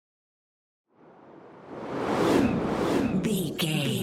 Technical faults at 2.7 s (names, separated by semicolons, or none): doubled audio track